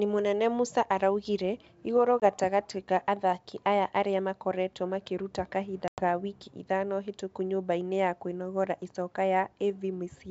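Packet loss on an ADPCM call cuts hard-edged silent gaps at 2.20–2.23 s (20 ms lost) and 5.88–6.02 s (100 ms lost). The decoder's predictor and step size lose sync with the sender's, so the speech returns slightly distorted before settling on the G.722 wideband path.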